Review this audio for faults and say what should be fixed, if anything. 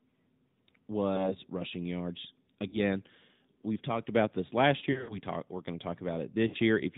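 Throughout the speech has a buzzy, synthetic edge with nothing above 4 kHz. This is the AMR narrowband mobile codec, which rebuilds the voice from a vocal-tract model and a few pulses per frame; the plainly audible damage fits a mid-range 10.2 kbps mode.

Brief dips and warbles are lost AMR speech frames. They occur at 1.16–1.35 s just before "rushing yards", at 2.68–2.78 s right after "rushing yards", at 4.92–5.20 s between "talked about this last" and "talk we're going to", and at 6.48–6.57 s. In each case the decoder repeated the last good pitch and vocal-tract settings with falling gain. The longest, around 5 s, sounds scattered, which suggests several gaps of up to 60 ms.

Capture over a wideband or higher-rate path with a stronger radio link, or record locally, to avoid both.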